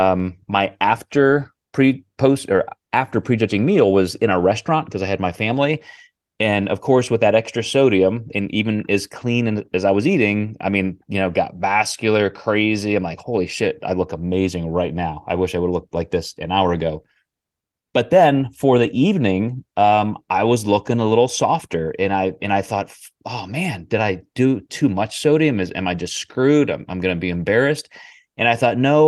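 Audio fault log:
No fault is logged for this speech audio.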